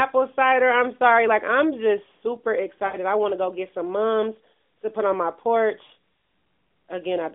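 At 2.86 to 2.97 s, just after "I'm just super", and at 5.86 to 5.91 s, after "to put on my", lost AMR speech frames made the narrowband decoder repeat its last pitch and vocal tract settings at falling gain. The sound smears and fades, then returns rough.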